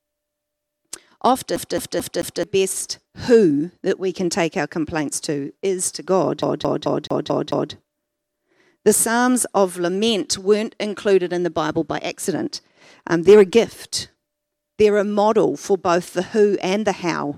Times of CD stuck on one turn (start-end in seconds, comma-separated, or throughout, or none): 1.56-2.43, 6.42-7.73